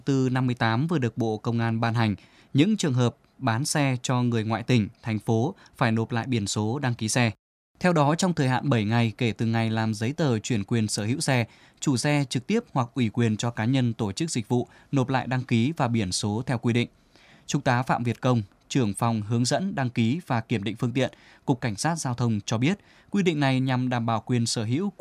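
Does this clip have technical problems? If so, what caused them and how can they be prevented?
No, this clip has no technical problems, so nothing caused any and there is nothing to prevent.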